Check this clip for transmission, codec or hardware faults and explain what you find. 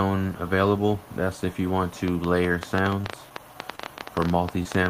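Two kinds of fault are present: a train of clicks over the second half of the clip and three short concealed packet losses.

The train of clicks runs from 2.08 s to the end. Sharp, similar pulses arrive about ten times a second at an uneven pace, standing well above the sound and audible in its pauses. The likely cause is electrical interference or a faulty connection or power supply injecting impulses. The matching pulse shape and the sustained rate over several seconds set this apart from isolated pops or the random crackle of a dirty contact.

The short concealed packet losses fall at 3.02–3.06 s, 3.75–3.80 s and 4.63–4.67 s. Each time, about 20 ms of audio failed to arrive, and the receiver filled the hole with roughly 19 to 24 ms of continuation of the preceding sound before blending back. They come across as brief smears or wobbles. Unlike the clicks, they carry no sharp transient and occur only three times, each replacing sound rather than sitting on top of it.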